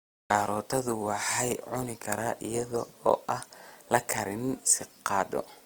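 Opus compression runs throughout the speech, from start to finish, and is likely the cause of the damage heard. The encoder's music mode keeps each band's energy but, short of bits, fills fine detail by copying lower bands or inserting noise, so the speech turns rough and grainy rather than swirly. The top still reaches about 20.4 kHz, yet the coarseness is plainly audible, which points to a low bitrate near 24 kbps.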